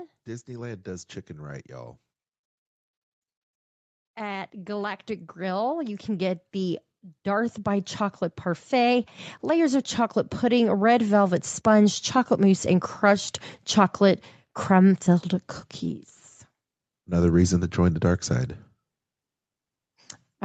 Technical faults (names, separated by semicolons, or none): automatic gain rising